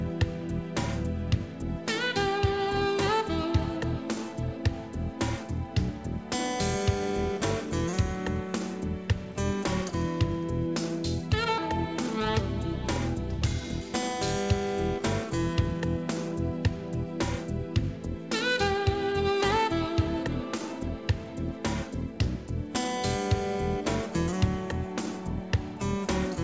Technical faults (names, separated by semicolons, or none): skip ahead; jitter buffer speed-up